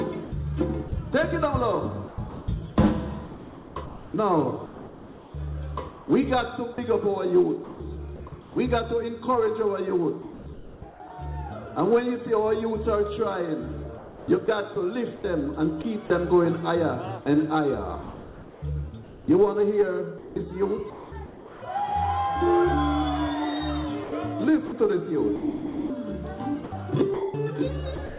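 Choppy stretches, where parts of the sound drop out, run from 0.24 to 8.56 s, 10.22 to 11.0 s, 13.98 to 16.1 s, 18.02 to 21.62 s and 24.04 s to the end. About 2.4 s, 0.62 s, 0.48 s, 1.6 s and 1.1 s are replaced in turn, all heard through a narrowband call path with nothing above 4 kHz. This is sound chopped by the voice detector, most likely the sender's detector repeatedly switching transmission off and filling the gaps with comfort noise.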